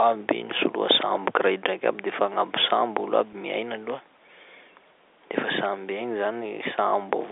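At 3.33 s, before "miaina aloha", packet loss with pitch repetition fills a 10 ms gap by repeating one pitch period, heard as a brief buzz and visible as identical cycles in the waveform.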